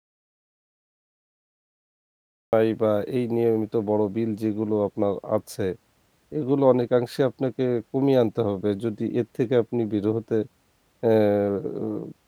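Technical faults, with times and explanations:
0.00–2.53 s, audio dropout to silence: the input was most likely lost, through a disconnected device, a failed link or a mute, while recording carried on writing silence. The speech opens in dead silence with no room tone, then begins abruptly mid-flow.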